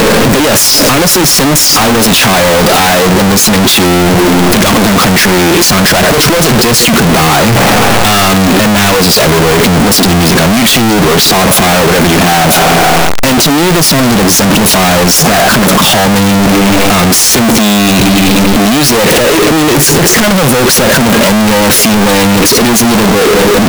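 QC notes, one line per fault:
throughout, signed and unsigned mixed up. The speech is covered by loud, harsh distortion, and quiet gaps are as loud as the talking. The likely cause is 16-bit samples read with the wrong sign convention. Every zero crossing then jumps across the full range.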